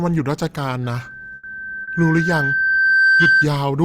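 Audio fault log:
0.83 to 3.48 s, loudspeaker feedback squeal: a single tone near 1.6 kHz appears and swells over roughly two seconds until it sits about 5 dB above the speech, then stops at 3.48 s. The microphone is hearing the loudspeaker it drives, and at 1.6 kHz the loop gain tops one, so that frequency feeds itself. On a spectrogram it is one bright horizontal line thickening with time. On the waveform the envelope rises steadily beneath the speech.
1.35 to 1.45 s, burst of packet loss: about 80 ms of audio never arrived in time, so the receiver stretched the last sound it had and faded it out. A voiced sound turns into a short held buzz and other sounds into a dying hiss. The speech then picks up 80 ms further on, with the part between missing. A spectrogram shows a frozen stretch that dims before an abrupt change of pattern. The waveform shows a stretch with a shrinking envelope.
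1.83 to 1.89 s, short concealed packet loss: 40 ms failed to reach the decoder, and the receiver filled the hole by continuing the previous sound before blending back into real audio, leaving a brief smear or wobble where a short consonant may be lost. On a spectrogram it shows as a thin slice where detail blurs into smoothed texture. The waveform shows a short stretch continued from the previous sound, then a join back into the speech.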